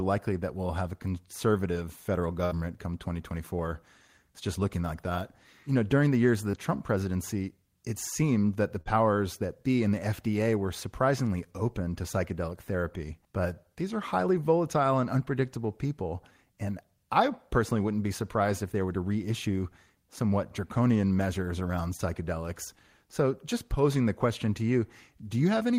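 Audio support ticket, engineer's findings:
Burst of packet loss, 2.45–2.53 s, right after "have a conservative federal". Jitter buffer/decoder concealment: about 56 ms of extrapolated sound, fading as the gap went on, then playback resumes with about 60 ms of speech gone.

Burst of packet loss, 8.81–8.94 s. Same receive-side mechanism: about 46 ms filled by continuing and fading the last sound, about 40 ms of speech skipped, plus a further 9 ms trimmed at the rejoin.

Short concealed packet loss, 6.51–6.55 s, after "the years of the". About 20 ms missed decoder deadline; the decoder extrapolated pitch or noise and cross-faded back. Audible as a brief smear/wobble.

Short concealed packet loss, 21.97–22.01 s, after "somewhat draconian measures around". About 20 ms did not reach the decoder in time, concealed by extending the prior sound for roughly 21 ms before blending back. Brief wobble at the join.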